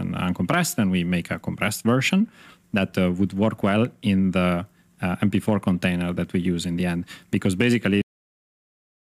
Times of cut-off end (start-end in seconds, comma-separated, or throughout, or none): 8.02-9.04